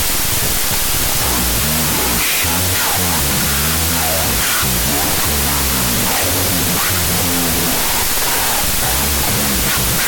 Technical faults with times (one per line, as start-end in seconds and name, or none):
0.00-10.07 wrong sample width